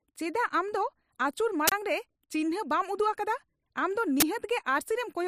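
At 1.68 to 1.72 s and 4.20 to 4.22 s, uninitialised buffer bursts: stale memory played as samples gives loud digital noise, fitting 2048- and 1024-sample blocks.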